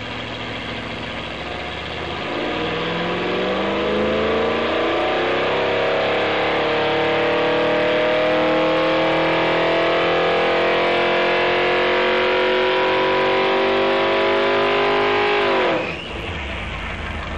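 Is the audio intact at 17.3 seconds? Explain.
No. At 17.3 seconds, as across the whole clip, a steady, raspy buzz sits well below the main sound, roughly 30 dB down. This is mains buzz at 50 Hz. Sharp switching spikes, from something like a dimmer, a rectifier or a missing shield, leak into the signal twice per mains cycle. Those spikes spread energy across a long series of 50 Hz harmonics reaching into the kilohertz range, which gives the hum its gritty edge.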